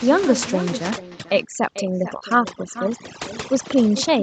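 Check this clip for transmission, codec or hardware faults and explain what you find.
Three faults are audible: an echo with no canceller throughout the speech, overdone noise removal from 0.91 s to the end, and two short concealed packet losses at 1.29 s and from 2.19 to 2.21 s.

Echo with no canceller: the far end's loudspeaker feeds back into its microphone, and nothing in the chain subtracts it. Every phrase returns roughly 0.4 s later as a thinner copy at about 12 dB below the direct speech, giving a constant doubled shadow.

Overdone noise removal: from 0.91 s onward, a suppressor set too aggressively cuts individual frequency bands it judges close to the noise floor, taking quiet speech detail with them. The room noise drops and breaks up into twinkling artefacts.

Short concealed packet loss: at 1.29 s and again between 2.19 and 2.21 s, audio arrived too late to decode. The receiver extended the preceding sound to bridge each gap, then crossfaded back, leaving a brief smear or wobble.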